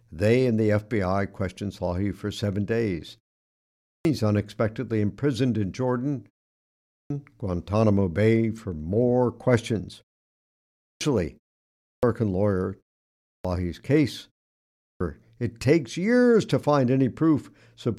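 The output device sleeps through each pause and wakes too slowly, so clipped starts after a pause swallow roughly a third of a second of speech at 3.68 s (after "for seven days"), 6.73, 10.66, 11.7, 13.11 and 14.63 s (before "it takes years to"), each entry bursting abruptly out of silence.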